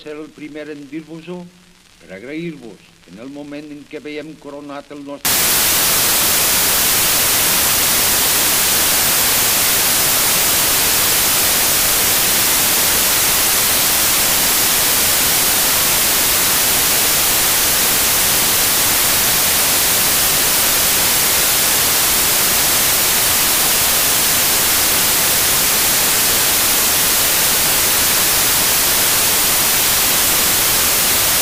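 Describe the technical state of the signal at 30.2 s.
At 30.2 s the reader is assembling each sample from the wrong bytes, so the fast-changing low bits take over the top of every value. This fault runs from 5.25 s to the end, heard as loud, harsh broadband noise, close to white on loud sounds.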